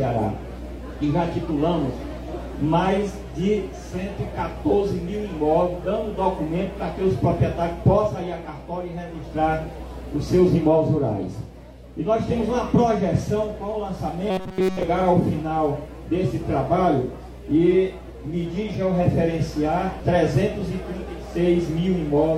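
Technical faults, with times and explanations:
14.30 to 14.83 s, robotic sound from repeated short buffers: the audio collapses into a rigid metallic buzz at about 188 Hz. That's likely a tiny chunk, around 5.3 ms, looped over and over while the real audio is skipped, with essentially nothing new getting through.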